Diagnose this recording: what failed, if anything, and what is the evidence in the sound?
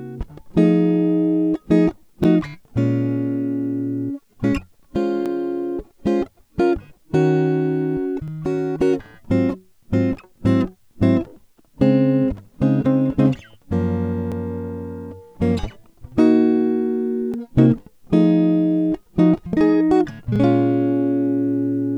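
Overlapping chunks in the buffer or chunked-processing stage: a short stutter in the music at 2.24, 5.26, 8.28, 11.30, 14.32, 17.34 and 20.36 s. Each 3.0 s chunk begins before the previous one ends, so 20 ms of audio plays twice at every join.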